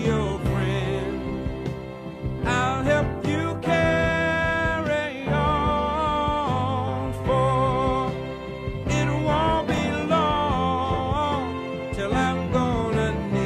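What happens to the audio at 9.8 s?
Chunks out of order, from 9.74 to 9.78 s. One 10 ms chunk plays three chunks late, after the audio meant to follow it. Nothing is lost. The reshuffled order creates three hard joins, heard as a brief jumbled moment.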